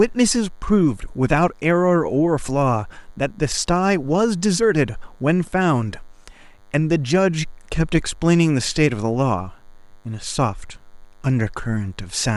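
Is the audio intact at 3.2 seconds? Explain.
No. At 3.2 seconds the speech carries a DECT cordless phone buzz, and it isn't confined to that moment: it runs through the whole clip. A nearby DECT handset or base transmits a brief radio burst every 10 ms, and the audio circuitry rectifies that energy into the signal, producing a thin, steady 100 Hz buzz rich in harmonics. It sits low, roughly 40 dB beneath the speech.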